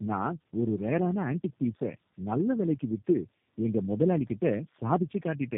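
Throughout the speech, tandem speech coding is audible: the audio seems to have passed through a low-rate speech coder three times, which fits repeated G.729A coding, each pass compounding the last one's errors. It sounds rough, muffled and warbly. A spectrogram shows nothing above 3.4 kHz, with smeared, blotchy harmonics.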